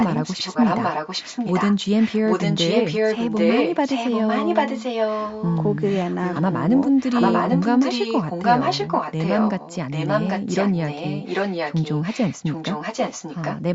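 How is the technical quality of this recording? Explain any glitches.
The recording has a persistent echo leak: a delayed copy of the speech sits about 792 ms behind the original through nearly the whole clip, from 0.0 to 1.78 s, 2.0 to 5.58 s, 5.86 to 6.53 s, and 6.97 s to the end. It's likely a far-end speakerphone whose echo canceller let its own mic pickup back through. Around 2 to 5.6 s it's roughly as loud as the speech, near 6 s it's much fainter, and elsewhere it's a little quieter. The audio tops out at 8 kHz.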